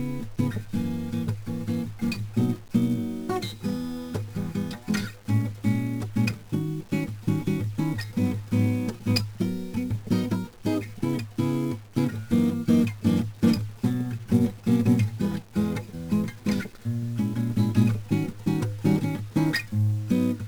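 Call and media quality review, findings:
1-bit DFPWM compression on the music, 0 to 20 s throughout. Fuzzy, crackly texture, treble buried under hiss. Probable component: low-rate DFPWM encoder, heavy damage, consistent with a 48 kbps stream. One bit per sample nudges an adaptive level up or down, leaving strong broadband quantisation noise. Spectrogram: raised noise floor across the full band, upper-range detail smeared into hiss. Waveform: grainy, jagged envelope.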